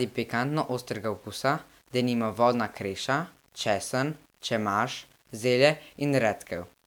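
Throughout the speech, quiet stretches turn gritty and fading tails sputter instead of decaying smoothly, likely from low bit depth without dither. Rounding to a coarse grid, fitting about 9 bits, leaves error roughly 35 dB down. Unlike steady hiss, this grain follows the signal and disappears in silence.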